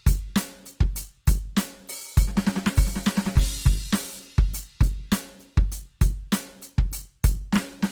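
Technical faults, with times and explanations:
Throughout, Opus compression: the music sounds plainly grainy and rough, with tones turned noisy rather than swirling, while the bandwidth stays full, reaching about 20.2 kHz. This is likely the codec's music mode filling starved bands with folded or noise content, which fits a bitrate near 16 kbps.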